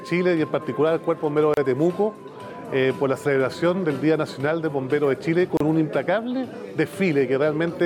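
At 1.54 s and again at 5.57 s, a gap at a join of encoded pieces cuts a 32 ms silence into continuous sound, repeating every 4 s where separately encoded segments meet with untrimmed delay and padding. Waveforms show flat dropouts; spectrograms show narrow vertical blank bands with smeared edges.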